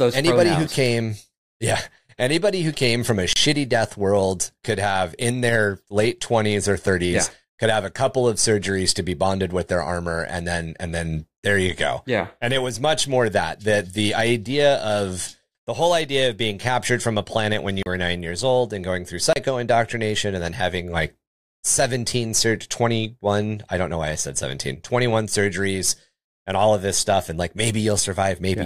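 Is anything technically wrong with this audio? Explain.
Yes. Blocks of digital silence break the speech at 3.33–3.36 s (30 ms), 6.87 s (about 5 ms), 17.83–17.86 s (33 ms) and 19.33–19.36 s (30 ms). Samples drop to silence and return without any fade, so the hard edges usually click. The 5 ms gap sounds like a tick, and the longer ones like brief holes. Unlike a natural pause or a faded dropout, the silence is total and abrupt.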